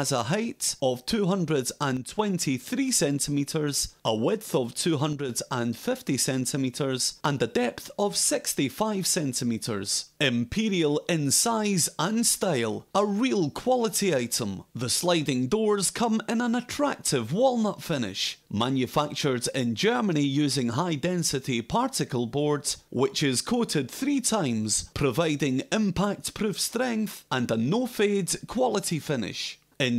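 The level abruptly sags by about 6 dB from 1.97 to 2.19 s and again from 5.13 to 5.29 s, then snaps back each time. This is likely one channel drops out: one stereo side briefly vanishes, halving the shared content in the mono sum.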